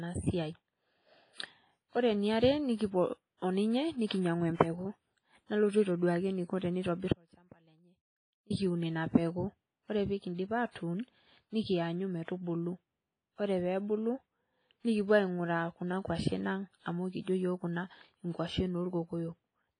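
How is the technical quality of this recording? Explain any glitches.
The recording has heavy codec damage throughout, three brief pre-echoes, and one long dropout.

WMA compression runs through the whole clip, likely from a low-bitrate encode around 24 kbps. Speech sounds washy and ringing, and the spectrogram shows nothing above 10.4 kHz, with patchy, holed upper bands.

Pre-echo appears at 3.37 s (after "eniare nekipuo", before "o ninye"), at 4.07 s (after "eniare nekipuo o ninye"), and at 12.24 s. Block-spread quantisation noise leaks ahead of sharp attacks, producing hiss smears of 51, 39 and 43 ms before each onset.

An audio dropout to a faint residue runs from 7.13 s to 8.50 s, just before "ina peku". The sound cuts abruptly for 1.37 s, leaving only a faint trace about 30 dB down. On the waveform this is a sudden near-flat stretch rather than a fade. The likely cause is a lost signal while the path stayed live.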